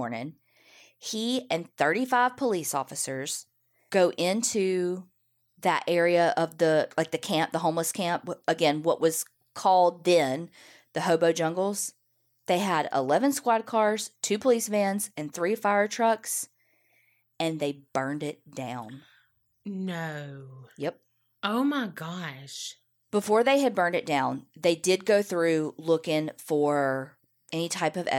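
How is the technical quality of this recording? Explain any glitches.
Nothing in the recording stood out as a technical problem on listening, so there are no glitches to explain.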